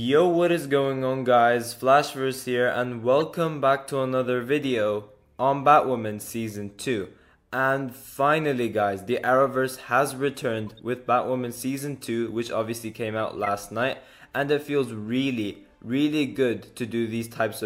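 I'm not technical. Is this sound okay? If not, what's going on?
No, there are three brief glitches, at 3.19–3.22 s, 10.67–10.80 s and 13.44–13.48 s. Each is a corrupt frame decoded: damaged data that got played anyway.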